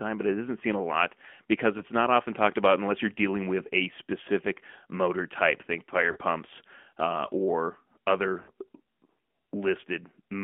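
The whole clip is speech carried by the AMR narrowband mobile codec. Sound is confined to a telephone band of about 200 Hz to 3.4 kHz. Nothing above 4 kHz survives. The codec damage is plainly audible. Voiced sounds take on a buzzy, synthetic edge. That texture fits a mid-range rate near 10.2 kbps. It comes from rebuilding the voice from a vocal tract model and a few pulses per subframe, rather than from the waveform itself.

Lost AMR speech frames appear three times. At 1.78 to 1.83 s there is a brief dip and warble, about 50 ms long, which fits one lost 20 ms frame. At 6.12 to 6.18 s the gap is longer, about 60 ms, matching two frames. The sound smears and sags there. At 8.42 to 8.50 s, about 90 ms, roughly three frames drop. Here the sound is visibly drawn out and fades before returning. In each case the decoder repeated its last good pitch and filter settings at falling gain.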